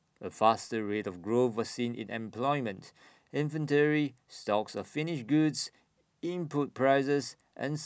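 No technical faults can be heard in this recording.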